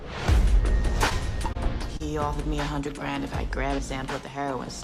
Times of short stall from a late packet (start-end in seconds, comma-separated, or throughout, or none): 1.53-1.57, 1.97-2.02